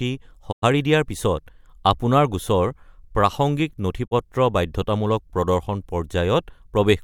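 At 0.51 s the speech fades out over about 20 ms into silence and returns at 0.64 s. A second, shorter hole runs from 4.06 to 4.13 s. This is a digital broadcast dropout: the receiver muted while it lacked good frames. The gap lengths suggest whole frames of about 32 ms, three lost the first time and one the second. It differs from packet-loss concealment because there is no smeared, repeated or stretched sound, only a quick fade to silence, and the audio sent during each hole is gone.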